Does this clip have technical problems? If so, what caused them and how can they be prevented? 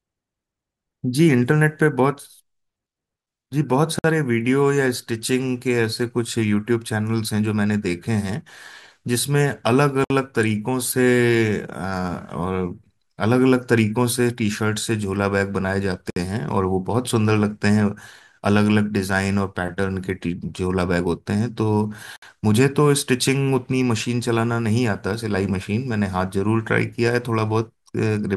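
Yes. The speech briefly drops into silence at 3.99, 10.04, 16.10 and 22.16 s. Each hole lasts about 54 to 60 ms and has smeared edges before the speech resumes where it stopped. These are gaps at joins of encoded pieces, arriving every 6 s. Each segment was encoded separately, and the encoder's start-up delay and last-frame padding were kept when the pieces were joined. To prevent this, encode the recording in one pass, or trim the delay and padding at every join.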